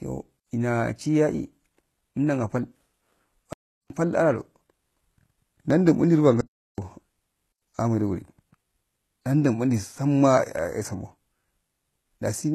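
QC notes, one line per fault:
throughout: HE-AAC compression, likely at a low bitrate near 16 kbps. The treble sounds rebuilt, with gritty, lispy s sounds and nothing above 12.3 kHz, which shows on a spectrogram as a hard ceiling and smeared, copied-looking upper bands.
0.40 s, 3.53–3.90 s, 6.41–6.78 s, 7.52–7.62 s: block of digital silence. The audio drops to silence for 67 ms, 372 ms, 372 ms and 93 ms, heard as holes with abrupt edges. The waveform shows flat lines, and the spectrogram shows blank columns. The last three lengths fit dropped 16384- and 4096-sample blocks.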